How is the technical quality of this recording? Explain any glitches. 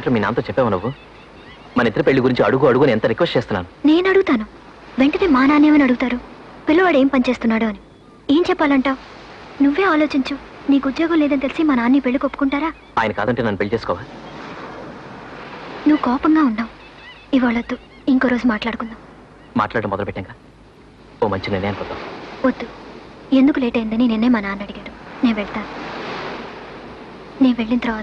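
No glitches or technical faults can be heard here.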